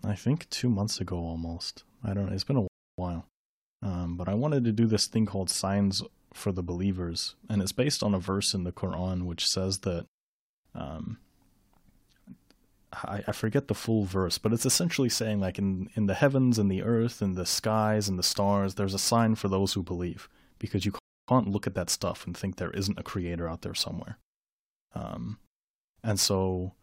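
At 2.68 s the speech halts in a rebuffering stall. Playback ran dry and waited for more data, leaving 0.31 s of silence before the sound picks up exactly where it stopped. That seamless resumption separates it from a dropout: nothing is skipped, and the timeline is simply stretched.

From 13.04 s to the end, sample clock jitter adds a fine hiss or grit. The converter's timing wanders by several microseconds, so each sample lands slightly off its proper instant. The resulting error scales with how steeply the waveform is changing, sitting roughly 20 dB below the speech. Unlike steady background noise, this roughness grows on loud passages and sibilant, high-frequency sounds and disappears entirely in pauses.

A second rebuffering stall at 20.99 s inserts 0.29 s of silence, again followed by an exact continuation with no material missing.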